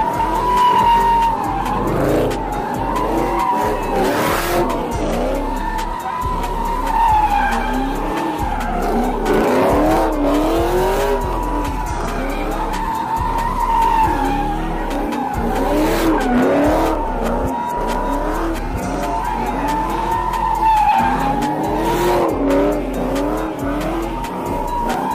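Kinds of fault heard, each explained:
Periodic USB or driver dropouts: a recurring stall on the USB bus or audio driver skips roughly a millisecond of audio each time, with nothing filled in. Here it repeats every 1.0 s from 0.96 s to 24.94 s, heard as regular ticks wherever sound is present.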